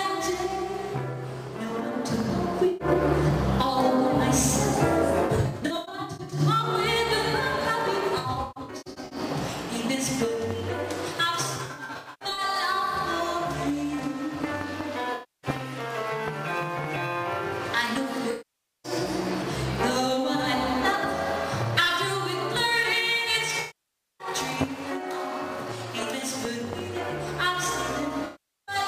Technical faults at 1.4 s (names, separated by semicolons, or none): none